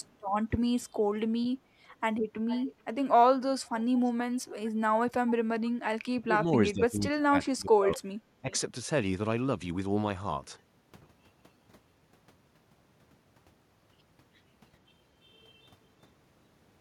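Between 0.0 and 5.71 s there are five bursts of echo leak: 0.0–0.14 s, 2.47–2.75 s, 4.03–4.12 s, 4.37–4.71 s and 5.65–5.71 s. A delayed copy of the speech trails the original, about 380 ms late in the first burst and about 440 ms late after that. It is loudest at 2.47 s, roughly 15 dB below the speech, and about 35 dB below it in the first and third bursts. The likely cause is a far-end echo canceller that let loudspeaker sound back through its microphone. On a spectrogram these appear as weak, smeared duplicates of earlier harmonic patterns, offset in time.

From 6.26 to 8.52 s the speech is suppressed in double talk in three spots: 6.26–6.56 s, 6.73–8.01 s and 8.41–8.52 s. The level sags by around 10 dB in the short first and last dips, each lasting about a tenth of a second, and by around 20 dB across roughly a second of the middle stretch. This is likely an echo canceller mistaking overlapping talk for echo and ducking both. 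The waveform shows sudden notches in the envelope.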